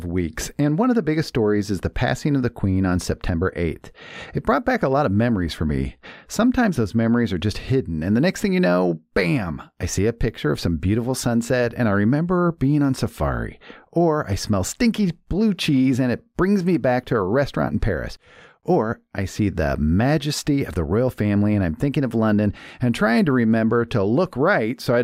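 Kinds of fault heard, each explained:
No kinds of fault are heard in this clip.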